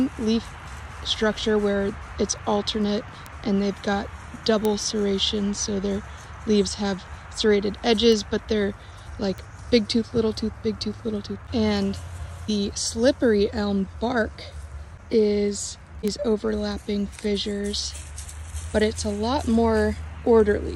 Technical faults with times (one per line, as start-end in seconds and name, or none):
3.26 bit error spike
4.65 bit error spike
8.12 bit error spike
9.38 bit error spike
16.08 bit error spike